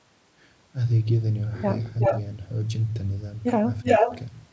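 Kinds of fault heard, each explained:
Echo leak: speech returns about 0.37 s late, near speech level or louder, likely past a loudspeaker echo canceller; the waveform shows duplicated, offset bursts.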